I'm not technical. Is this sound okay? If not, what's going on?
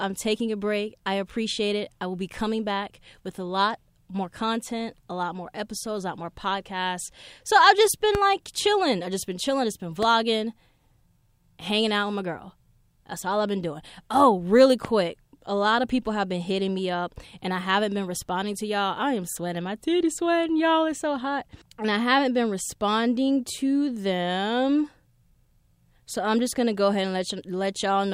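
No. There are two loud pops, sharp clicks at 8.15 to 8.18 s, just after "I've just", and at 14.85 to 14.88 s, each jumping well above the speech. The likely cause is a sudden electrical jolt, such as static or a switch.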